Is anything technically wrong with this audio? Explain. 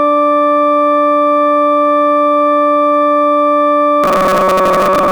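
Yes. From 4.04 s to the end at 5.12 s, new audio likely arrived too seldom, so playback kept repeating a buffer of about 5.3 ms while most of the music was skipped. This is robotic sound from repeated short buffers: a rigid, metallic 188 Hz buzz that only loosely follows the music.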